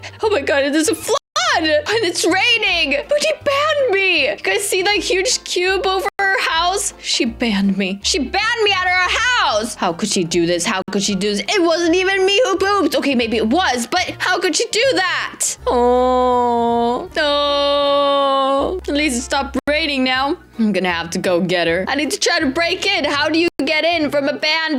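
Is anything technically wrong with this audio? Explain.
Yes. The sound drops out to complete silence five times, at 1.18, 6.09, 10.82, 19.59 and 23.48 seconds. The gaps last about 184, 106, 58, 86 and 114 ms. Each time the audio resumes where it left off or slightly later. This is likely a Bluetooth stall. Radio interference delays packets on the wireless link. The headphones' buffer empties before the resent data arrives. Playback simply halts, then continues once the data catches up.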